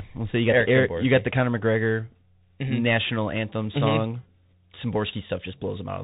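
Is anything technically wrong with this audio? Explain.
Yes. Throughout, the speech has passed through a Bluetooth CVSD headset codec, which fits a 64 kbps link. Each sample is a single up-or-down step whose size adapts, so nothing above 4 kHz survives, s sounds turn scratchy, loud bright moments distort, and a granular hiss sits beneath. That gritty hiss sets it apart from a clean telephone band-limit.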